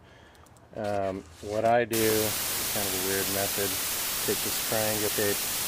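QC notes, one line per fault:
1.93 s to end: low bit depth with dither. The audio drops to a 3-bit resolution with dither added before rounding, so the quantisation error becomes a steady, even white hiss rather than distortion. The hiss sits at roughly the same level as the sound itself.
2.29–2.33 s and 5.06–5.10 s: damaged data in a compressed stream. Two short bursts, about 40 ms each, where corrupted frames are misread by the decoder, which loses sync and must find the next frame header. Each is heard as a brief blip or squawk.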